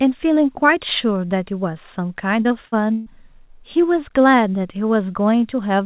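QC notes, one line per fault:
2.42–3.08 s, repeated packet loss (robotic sound): four dropouts, longest 139 ms, each filled by repeating preceding audio. Over a third is patched, so it sounds choppy and robotic.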